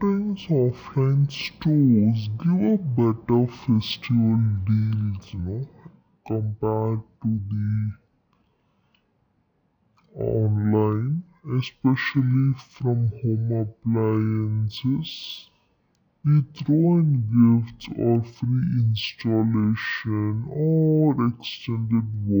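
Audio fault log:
Throughout: stereo read as mono. The speech plays at 0.5 times its normal speed and sits 12 semitones, a full octave, too low, because alternating left and right samples are being read in sequence as one channel, so every stretch of sound occupies twice as many samples as it should. On a spectrogram the harmonics are squeezed into the lower half with a fainter mirrored copy in the upper half, and the waveform looks stretched to double length.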